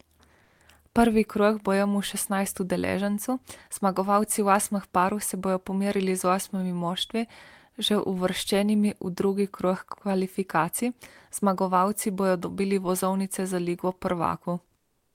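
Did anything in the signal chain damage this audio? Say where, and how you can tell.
Yes. The codec likely switched to discontinuous transmission from 14.77 to 15.14 s, leaving comfort noise in place of the background: flat hiss about 7 dB quieter.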